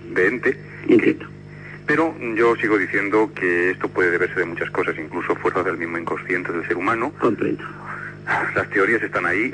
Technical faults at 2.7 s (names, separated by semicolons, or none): none